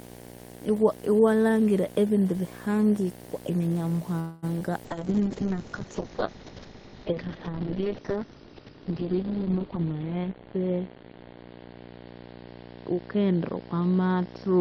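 Speech runs through the whole clip over a video or display buzz, a 60 Hz buzz at the screen's field rate, sitting roughly 15 dB below the speech, with a gritty hash spread above it. What separates it from ordinary mains hum is that hash: a grounding hum is a smooth low tone with a few harmonics, while display coupling brings a spiky, raspy band of interference tied to the picture refresh. At 4.19 s the sound stops moving forward and the last instant is drawn out as a fading buzz for about 0.23 s until 4.45 s, after which the speech resumes exactly where it left off. That points to a call audio freeze, most likely packets held up in transit so the jitter buffer ran dry. Unlike a dropout, nothing is lost, and the rest of the call arrives about 0.23 s later. Shortly after, from 4.59 to 4.63 s, comes short concealed packet loss: 20 ms never arrived and was patched by extending the preceding sound, heard as a brief smear or wobble. 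Here, in contrast to the freeze, that slice of the original really is gone rather than delayed. From 4.85 s to the end the call bitrate drop takes hold. The audio turns rough and watery and loses everything above 6 kHz, having previously reached up to 20 kHz, and it stays at its worst for about 4.9 s. This fits the encoder being pushed from around 32 kbps down to about 6 kbps. A lowpass filter alone would only muffle the sound, but this degradation also brings coarse, swirling coding artefacts. Between 9.66 and 11.13 s a jitter buffer speed-up hurries the speech to about 115% of its normal pace. Short pitch-period pieces, about a fifth of a second in total, are cut out to shed excess delay. The pitch stays where it was, which is what tells this apart from simply playing the audio faster, where the sound would also rise in pitch.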